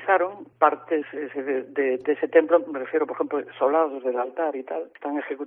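At 1.01 s, compressed frames are skipped. Around three frames never reach the output, so the audio jumps forward by about 70 ms, which fits a frame length near 26 ms. Because overlapping frames blend at the join, it sounds like a brief smeared blip instead of a sharp click or a silent dropout.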